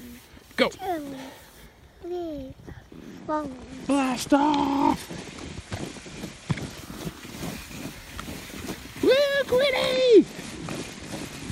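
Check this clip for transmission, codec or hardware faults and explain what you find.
There is one recurring fault. Bluetooth SBC bit pool drop, 3.11 to 6.77 s and again from 9.93 s to the end: the link's bit budget falls, which fits a bit pool cut from 31 to about 12 (near 88 kbps). Upper sub-bands starve, so the treble dulls and coarse quantisation adds gritty noise.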